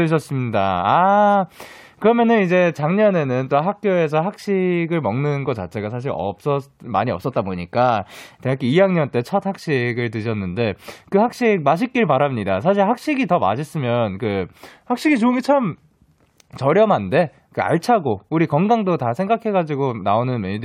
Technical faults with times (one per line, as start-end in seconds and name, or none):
7.16-8.43 drift correction step
14.71-16.19 drift correction step